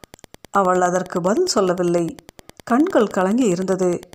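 Wi-Fi interference runs throughout the speech: a nearby radio's beacon, rectified by the audio circuit, ticks every 102.4 ms, roughly 25 dB below the speech.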